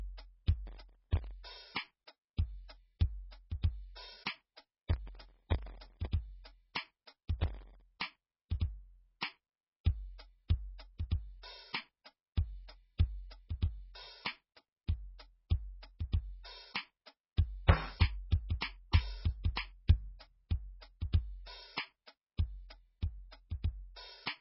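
Right from the start, the music sounds like likely MP3 compression at a very low bitrate, something like 16 kbps. There's nothing above 5.6 kHz, and the codec damage is heavy: weak detail swirls in and out and attacks smear across the whole clip.

On top of that come four bursts of processor overload crackle, at 0.67 to 1.31 s, 4.10 to 6.07 s, 7.40 to 7.82 s and 13.97 to 14.86 s. Audio buffers of under a millisecond keep missing their deadlines, and each miss leaves a tiny silent gap. Dozens to a couple of hundred of those gaps in each stretch add up to a gritty tearing.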